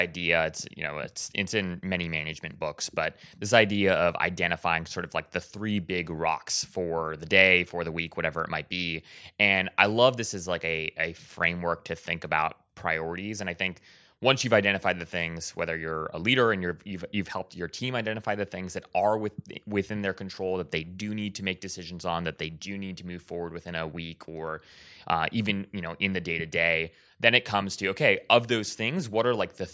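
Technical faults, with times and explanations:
No technical faults, with times and explanations, to report for this speech.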